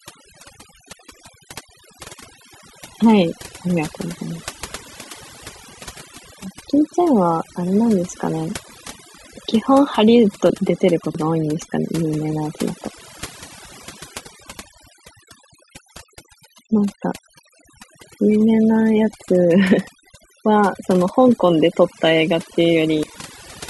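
From the start, overdone noise removal is at work. The reduction was set too hard. Frequency bands near the noise estimate are cut deeply, with quiet parts of the voice. The background drops and breaks up into twinkling specks.

At 0.93 s, 10.5 s, 11.15 s and 23.03 s, the sound skips ahead. No silence comes between. Roughly a tenth of a second goes missing each time, closer to a fifth at 10.5 s. A dropped buffer (overrun) is the likely cause.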